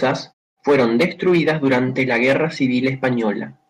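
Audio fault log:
No faults heard in this speech clip.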